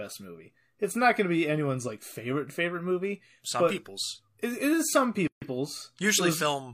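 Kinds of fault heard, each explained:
Gap at a join of encoded pieces: the speech breaks off in a 144 ms gap, from 5.27 s to 5.42 s, then picks up exactly where it stopped. The segments on either side were encoded separately and joined without trimming, so the encoder's start-up delay and the padding in the previous piece's last frame both remain as dead air. The gap's edges are softened by the codec's smearing.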